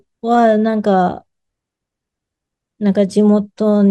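Nothing technically wrong turns up anywhere in this short bit of speech, so there's no fault to pin to a time or trace back to a cause.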